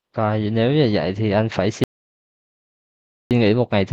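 A speech recording cuts to dead silence at 1.84 s and resumes mid-flow at 3.31 s, leaving about 1.47 s with no room tone at all. This audio dropout to silence likely came from the input being lost while the recorder kept writing silence.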